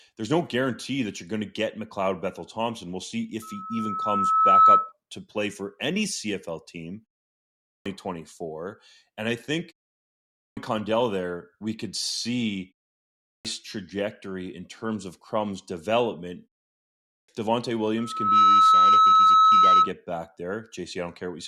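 At 3.42 s a loudspeaker feedback squeal begins: a steady 1.3 kHz tone swells over roughly a second to about 15 dB above the speech, then stops at 4.92 s, just before "to play for any". The microphone is re-amplifying its own loudspeaker with loop gain above unity at that frequency.

Clipped starts after a pause follow at 7.52, 10.26 (after "I think"), 13.10 (after "there we could see", ahead of "trajectory in terms of") and 16.95 s. Each comes after roughly half a second of silence, and the first 0.31 to 0.35 s of the next phrase is missing while the sleeping output device wakes, so speech resumes abruptly.

A second feedback squeal at the same 1.3 kHz runs from 17.98 to 19.92 s. It builds faster, in about 0.4 s, to a similar level of about 15 dB over the signal.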